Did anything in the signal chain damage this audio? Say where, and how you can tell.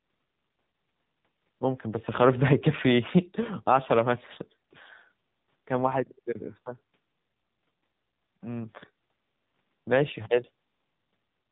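Yes. Throughout the speech, the voice sounds buzzy and synthetic, with nothing above 4 kHz. That points to the codec stage: an AMR narrowband mobile codec rebuilding speech from a vocal-tract model at a low bitrate, which fits AMR-NB at 7.4 kbps.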